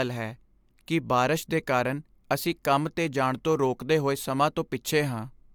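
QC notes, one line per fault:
No faults found in this speech clip.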